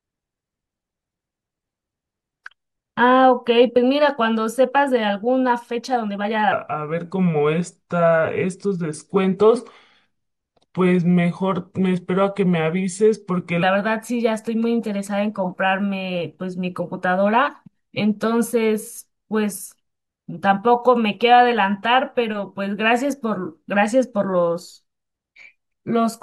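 From 6.52 to 13.63 s, a section at the wrong speed plays at 0.85x. Speech sinks about three semitones and slows, likely from a clock mismatch.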